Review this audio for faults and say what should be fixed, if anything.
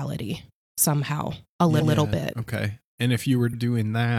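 Repeated frames: the encoder or transport wrote a block of compressed audio twice, so the speech stutters at 1.77–1.91 s, between "somehow a" and "yeah bit", replaying 139 ms, and at 3.49–3.55 s, replaying 46 ms. Preventing this means deduplicating frames by sequence number or timestamp before they reach the decoder.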